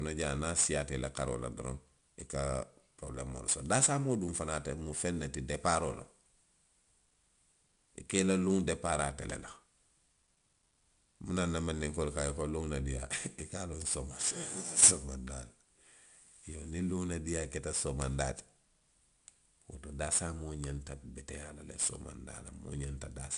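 4-bit ADPCM compression runs throughout this speech. Each sample is coded as a small step from a predicted value, so a plainly audible gritty hiss rides on every loud passage and attacks distort. Nothing sounds above 10.6 kHz, which fits roughly 89 kbps.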